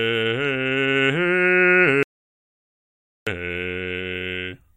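From 2.03 to 3.27 s the music falls to complete silence: an audio dropout to silence, likely lost input while zeros kept being written.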